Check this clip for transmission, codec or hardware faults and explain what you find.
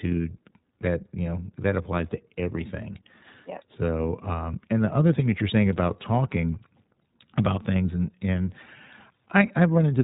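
One codec fault runs through the whole speech clip. The iLBC codec codes each short frame independently, likely around 20 ms, discarding everything above 4 kHz, so speech sounds muffled, plainly rough and synthetic throughout.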